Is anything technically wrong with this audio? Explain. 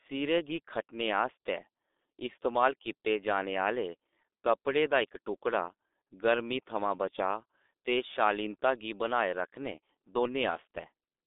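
Yes. Throughout the recording, the speech has passed through the G.723.1 codec, an early low-rate telephony coder. Its heavy, coarse coding fits a rate near 6.3 kbit/s. It keeps only a narrow telephone band of roughly 250 Hz to 3.7 kHz and discards everything above 3.8 kHz. Its slowly updated model of the voice smears rapid changes. The speech therefore sounds muffled and hoarse, with consonants that blur together and lose their crispness.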